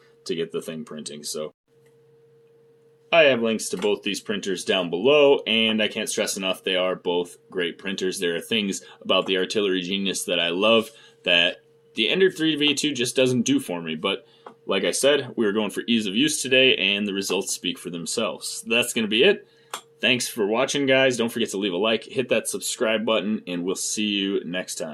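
No technical faults are audible anywhere in the recording.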